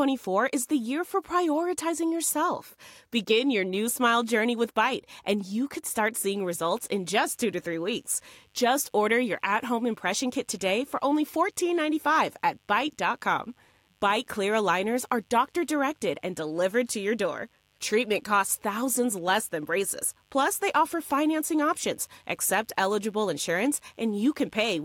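Mains buzz enters at 6.32 s, right after "and you could start", and continues to the end of the speech. It is a steady, raspy buzz built on the 50 Hz mains frequency, with harmonics climbing into the kilohertz range. Sharp switching spikes, arriving twice per mains cycle, have leaked into the signal path, most plausibly through a dimmer, a rectifier or a missing shield. The buzz sits quietly, roughly 40 dB below the speech, but persists underneath it throughout.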